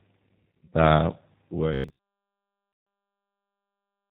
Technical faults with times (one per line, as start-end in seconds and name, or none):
0.00-4.10 G.729 codec
0.65-0.72 VoIP packet loss concealed by the speech codec
1.74-2.10 robotic sound from repeated short buffers
2.73-2.87 VoIP packet loss concealed by the speech codec